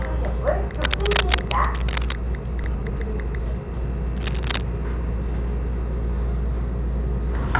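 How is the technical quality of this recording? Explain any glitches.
The recording has several audible glitches, all heard through a narrowband call path with nothing above 4 kHz, consistent with G.711 A-law telephone coding.

Cable scratch noise, 0.74 to 2.13 s and 4.16 to 4.65 s: a worn connector or cable being moved is the likely cause. It adds ragged, rustling bursts, first about as loud as the sound itself, then somewhat quieter.

Skip ahead, 2.64 to 2.66 s: roughly a second of audio was discarded while later audio was already waiting. Playback jumps forward with no gap, and the two sides butt together abruptly.

Jitter buffer speed-up, 2.75 to 3.47 s: the buffer was running too full, so the receiver trimmed short pitch-period slices, removing around 150 ms. The sound plays at 117% speed at unchanged pitch and feels hurried.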